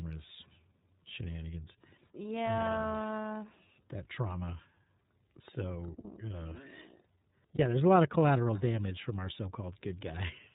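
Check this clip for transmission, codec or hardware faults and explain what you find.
Two things stand out: a narrowband codec coloring the whole clip, and one short dropout near the end.

Throughout, this speech runs through the iLBC codec. Everything above 4 kHz is gone, so it sounds boxed-in, and the voice has a slightly rough, synthetic edge. That fits iLBC's 30 ms frame mode at 13.33 kbps, where each frame's excitation is coded on its own and the damage is plainly audible.

From 7.55 to 7.59 s there's a lost iLBC frame, roughly a single 30 ms packet's worth. The decoder covered the hole by repeating the last pitch cycle blended with noise, so you hear a brief held, buzzy vowel. Since iLBC frames don't depend on their predecessors, the voice snaps back cleanly right after.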